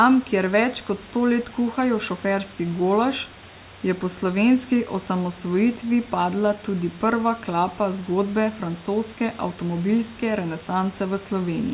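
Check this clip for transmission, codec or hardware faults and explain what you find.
Nothing stood out on listening to this speech recording, which comes through the call's narrowband path with nothing above 4 kHz and room noise sitting about 24 dB below the speech.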